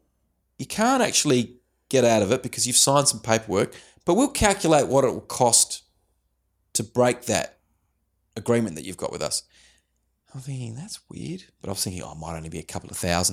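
No technical faults are audible anywhere in the speech recording.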